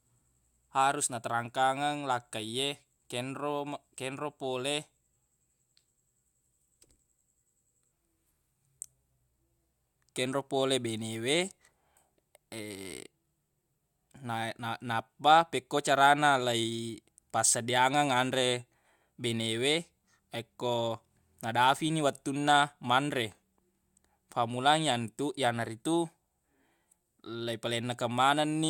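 No technical faults can be heard in this speech recording. There is nothing to place on a timeline.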